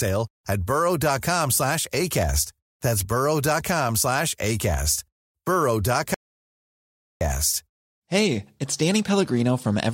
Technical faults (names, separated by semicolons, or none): audio dropout to silence